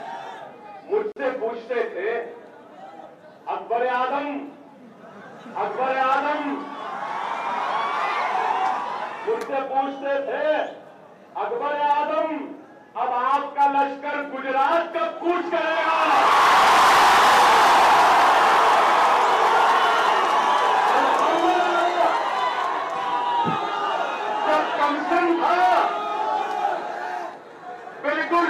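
A gap at a join of encoded pieces opens at 1.12 s and lasts about 43 ms, until 1.16 s. Two separately encoded pieces were butted together untrimmed, so one run's end padding and the next run's start-up delay leave a brief, slightly smeared silence before the sound resumes where it broke off.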